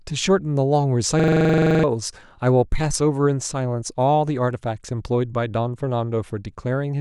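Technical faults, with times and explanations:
1.20–1.84 s, system hang loop: the system froze while the sound card kept replaying the same 43 ms chunk, 15 times at 23.4 Hz, so you hear a rattly machine-gun stutter. That length fits a 2048-sample buffer, and roughly 0.7 s of speech is lost.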